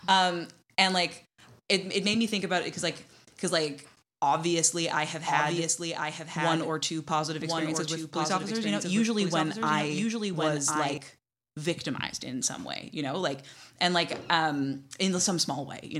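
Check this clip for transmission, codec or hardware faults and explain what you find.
A doubled audio track runs from 4.8 s to 11.0 s: a second, full-band copy of the speech trails about a second behind, a few dB quieter. The likely cause is a slower second capture path. Unlike an echo, it does not decay or repeat, has no room colour, and starts and stops abruptly.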